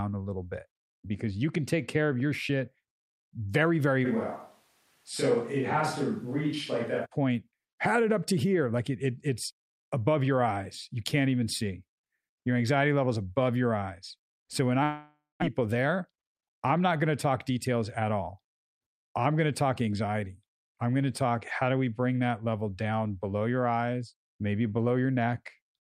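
From 4.07 s to 7.04 s, after "very very", the speech turns suddenly roomy and hollow with thinner bass, at about the same level but with background noise only about 35 dB below it, then snaps back before "point had it up". This is likely a switch to a distant microphone.

At 14.83 s the last sound stretches into a fading buzz, then about 0.2 s of silence. When the audio returns at 15.44 s, about 0.4 s is simply gone. The likely cause is a long network dropout.

From 15.54 s to 17.76 s, just before "at all", the speech runs about 7% fast at unchanged pitch and sounds hurried. This is a jitter buffer speed-up: the receiver trimmed many pitch-period-sized slices, around 150 ms in all, to work off delay built up around the dropout.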